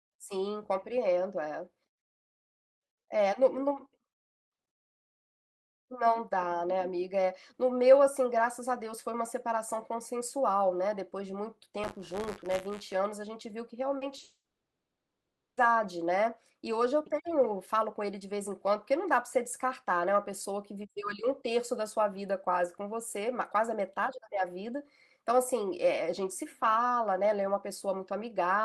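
It's a speech clip with three problems clustered in the middle. From 11.83 to 12.93 s there's buffer tearing: a steady robotic buzz at 100 Hz, which fits a 10 ms buffer period. The writer and reader of the ring buffer have slipped, so a small slice of each period replays audio from roughly 40 ms earlier, with hard joins. Then come short concealed packet losses at 13.97 s (40 ms), 14.07 s and 14.17 s (20 ms each). The decoder patched each gap by extending the last sound and blending back, so you hear quick smears or wobbles. Right after, from 14.23 to 15.59 s, the audio carries on as a fading buzz or hiss and then goes silent for about 1.2 s before resuming without the missing part. That's most likely a long network dropout.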